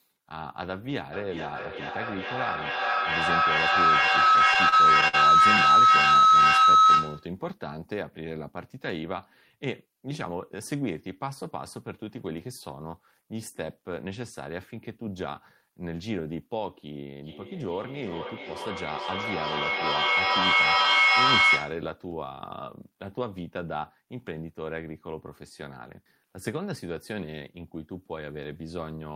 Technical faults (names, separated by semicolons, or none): feedback howl; repeated stalls (stutter); jitter buffer slow-down; jitter buffer speed-up; feedback echo between two devices